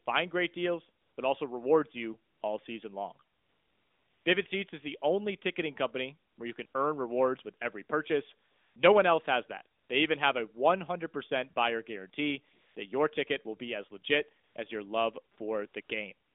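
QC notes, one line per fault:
1.02–16.35 s, AMR comfort noise: thirteen pauses, first after "great deals", 20 ms to 0.9 s long (longest 3.36–4.26 s), where the real background gives way to a smooth, steady hiss that switches in and out. The phone judged these pauses silent and stopped sending speech frames, so the receiver synthesised noise from a coarse level-and-spectrum description.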